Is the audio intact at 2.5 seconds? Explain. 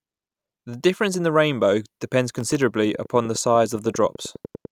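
No. From 2.38 to 2.62 s the speech carries processor overload crackle. The processor repeatedly missed deadlines for very short buffers, dropping around ten of them to silence. This produces gritty tearing, which shows as tiny near-silent gaps in the waveform and thin vertical broadband streaks on a spectrogram.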